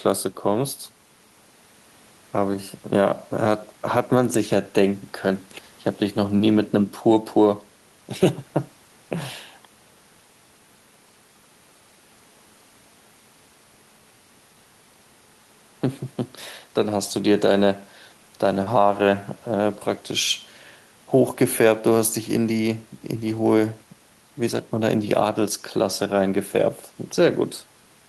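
No technical faults are audible.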